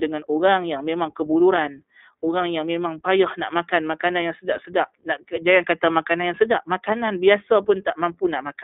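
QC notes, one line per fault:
Throughout: iLBC codec, plainly rough, synthetic speech confined to about 250 Hz–3.7 kHz, with each 20 ms frame's excitation coded independently, fitting a 15.2 kbps narrowband stream.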